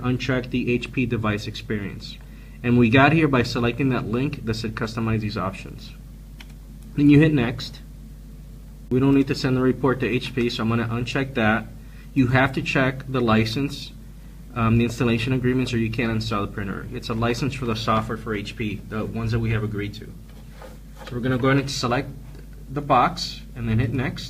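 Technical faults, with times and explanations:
Throughout, mains hum: a constant 50 Hz drone, roughly 20 dB below the sound, where power-line current leaks into the signal path through a ground loop or nearby transformer. On a spectrogram it forms an unbroken horizontal line at 50 Hz, with fainter parallel lines at low harmonics.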